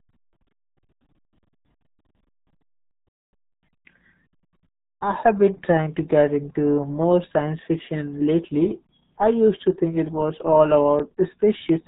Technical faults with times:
0.00-11.88 RealAudio 14.4 codec

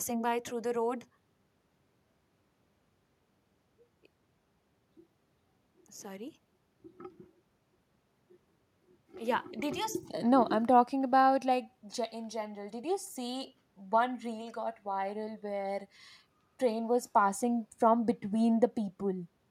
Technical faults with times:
none

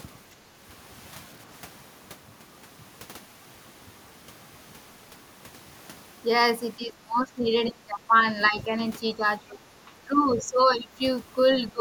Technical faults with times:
6.77-8.15 speech suppressed in double talk
8.49-8.76 speech suppressed in double talk
9.14-9.58 speech suppressed in double talk
10.06-10.89 speech suppressed in double talk
11.72-11.81 speech suppressed in double talk

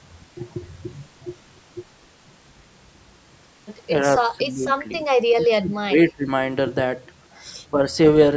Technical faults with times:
4.29-5.03 speech suppressed in double talk
5.35-6.29 speech suppressed in double talk
7.73-7.81 speech suppressed in double talk

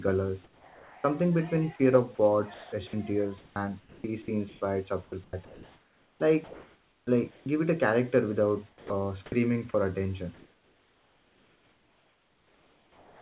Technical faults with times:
0.44-1.04 sound dropped by the voice detector
2.15-7.46 sound chopped by the voice detector
8.69-9.74 sound chopped by the voice detector
10.34-13.22 comfort noise in place of the background

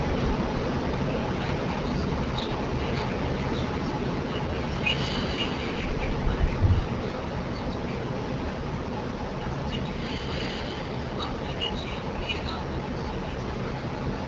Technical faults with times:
0.00-14.27 AMR wideband (HD Voice) codec

